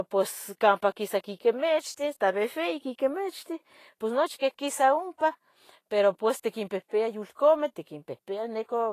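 Throughout the speech the treble is grainy and hissy, with no content above 14.2 kHz. Fine high-frequency detail has turned into noise of similar energy. This is plainly audible Vorbis compression, likely at a low quality setting that fits a bitrate of around 34 kbps. Unlike simple low-pass filtering, which only dulls the top end, this leaves a busy, coarse texture in the band that remains.

From 5.18 to 5.21 s, a hiss of about 24 ms comes just ahead of a sharp onset, and the attack itself sounds softened. This is pre-echo. The codec spread quantisation noise meant for the loud transient across its whole transform block, so the noise also fills the quiet gap before the onset. It differs from a click or dropout because it is a smear of noise that leads into the attack, not a discontinuity.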